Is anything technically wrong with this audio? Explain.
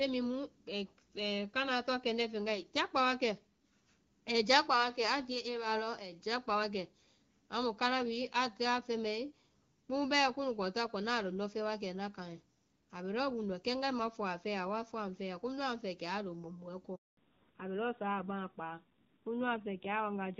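Yes, there are two faults near the end of this speech clip.

At 16.95 s a handover gap begins: the call switches networks and no speech frames arrive for 220 ms, until 17.17 s. The sound fades out within a few tens of milliseconds and goes silent. On the waveform this is a flat line, and on the spectrogram it is a blank vertical band.

From 17.17 s to the end there is a fallback to narrowband. The light-sounding HD Voice (AMR wideband) coding before the gap, consistent with about 12.65 kbit/s, gives way to what fits AMR-NB at roughly 7.4 kbit/s. Nothing remains above 4 kHz, so the speech turns duller and rougher. The spectrogram shows a sharp ceiling at 4 kHz.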